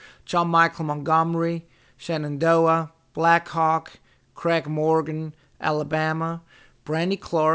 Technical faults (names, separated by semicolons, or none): aliasing